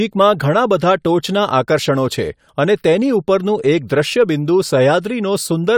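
Nothing in this recording stood out as a technical problem on listening.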